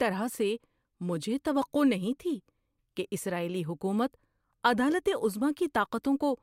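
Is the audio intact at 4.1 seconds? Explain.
Yes, the speech at 4.1 seconds is intact, with no dropout, glitch or other technical fault at that point.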